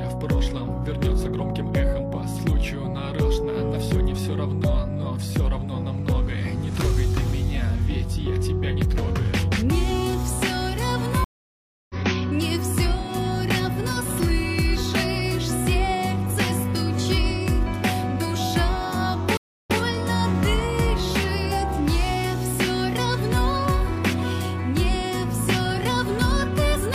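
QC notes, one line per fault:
11.24 to 11.95 s, stream reconnect: the sound cuts to silence for 653 ms after the connection drops. A fresh decoder then picks up mid-stream. Playback resumes about half a second further on, so a short stretch is skipped.
19.37 to 19.79 s, stream reconnect: a shorter silence of 283 ms follows another dropped connection. This time the audio restarts 139 ms earlier than where it stopped. A resent burst means that brief stretch plays twice.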